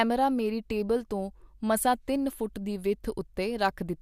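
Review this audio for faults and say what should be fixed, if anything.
No audible faults found.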